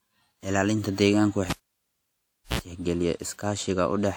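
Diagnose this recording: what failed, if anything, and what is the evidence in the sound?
The failure is in the analogue wiring: a cable pulled and plugged in while live. At 1.50 s a pop marks the contact breaking, and the speech drops to near silence for about 1.04 s. Just before recovery, a burst of 60 Hz mains buzz lasting about 59 ms appears as only the plug tip touches, leaving the input unshielded and ungrounded. A second pop follows as the connection seats and the signal returns at 2.59 s.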